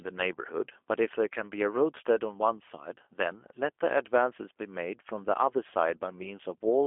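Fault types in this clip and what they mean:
G.729 codec: The speech is rebuilt by a low-rate coder that models the vocal tract and pitch and sends only a few pulses per short frame. The result is intelligible but plainly rough and synthetic, with a buzzy, slightly metallic texture that fits an 8 kbit/s G.729A coder, heard throughout. A plain telephone band limit (about 300 Hz to 3.4 kHz) would only sound thin, while this coder also adds that roughness.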